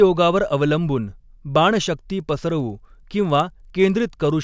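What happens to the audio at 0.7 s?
Nothing goes wrong at 0.7 s; the speech there is intact, with no dropout, glitch or other fault to be heard.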